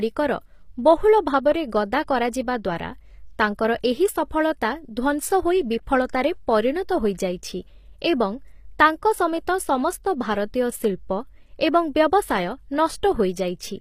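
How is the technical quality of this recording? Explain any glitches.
The technical quality is noticeably compromised: the whole speech clip carries plainly audible codec damage consistent with HE-AAC compression, likely from a low-bitrate HE-AAC v2 encode, on the order of 24 kbps. Throughout, s sounds come out gritty and lispy, with a metallic sheen in the treble. Only the lower spectrum is truly coded; the top is synthesised by copying lower bands upward under a coarse envelope, so harmonics fail to align above the crossover. On a spectrogram the upper region looks blocky and repetitive, and ends flat at 15.5 kHz.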